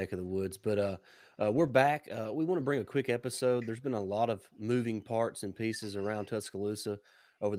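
No technical faults can be heard anywhere in the speech.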